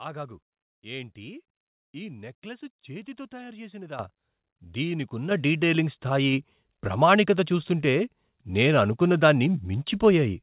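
Speech with three microphone volume step-ups, where the call software's automatic gain control raised the input level in single jumps, lifting voice and background together: about 11 dB at 3.99 s, right after "నెక్లెస్ చేతితో తయారు చేసినదా"; about 6 dB at 5.31 s, just before "డీటయిలింగ్ స్థాయి ప్రామాణికత చూస్తుంటే"; and about 2 dB at 6.33 s, between "దీనికున్న డీటయిలింగ్ స్థాయి" and "ప్రామాణికత చూస్తుంటే". The audio passes through a call path with nothing above 4 kHz, which fits G.711 mu-law at 64 kbps.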